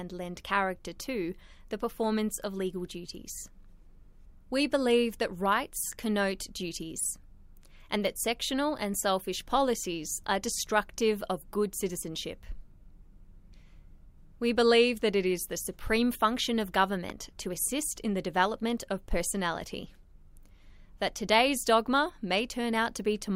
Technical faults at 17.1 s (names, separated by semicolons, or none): loud pop